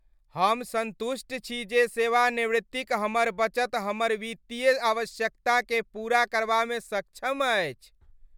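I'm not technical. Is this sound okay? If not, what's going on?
Yes, no faults can be heard.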